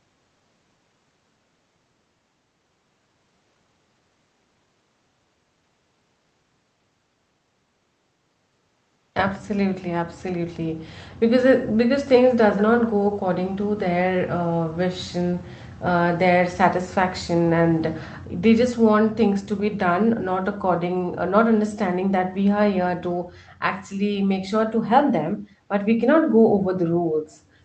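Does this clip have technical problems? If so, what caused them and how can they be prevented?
Yes: an echo leak, twice. The far end was likely playing the call on a loudspeaker, and its echo canceller let part of the returning signal through, so a copy of the speech arrives about 172 ms late. This is heard as brief, faint scraps at 12.56 to 12.63 s and again, somewhat louder, at 13.11 to 13.20 s, sitting well below the main speech. Headsets at the far end, or an echo canceller with enough tail length and proper adaptation, would prevent it.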